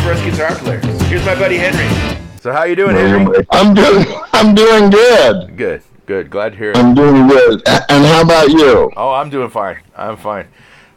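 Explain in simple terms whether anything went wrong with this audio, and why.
Nothing went wrong with this audio, as no technical fault can be heard anywhere in it. From beginning to end, there is nothing that interrupts or spoils it.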